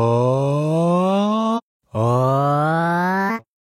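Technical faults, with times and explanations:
1.54 s to 1.60 s and 3.25 s to 3.31 s, compressed frames skipped: at each point the sound jumps forward abruptly, losing roughly half a second at the first and roughly 0.7 s at the second, with a short disturbance at the join. Runs of whole compressed frames, about ten and then about fifteen, which fits frames of roughly 46 ms, were never played because they were missing or rejected as damaged, so playback resumes later in the audio.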